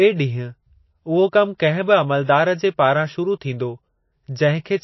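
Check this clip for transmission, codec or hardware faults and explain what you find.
One fault runs through the whole clip. Plainly audible damage of the MP3 compression kind is present, likely from a very low bitrate. Nothing reaches above 5.8 kHz. Short of bits, the encoder cut the treble and zeroed weak frequency lines, so the speech sounds dull, watery and swirly.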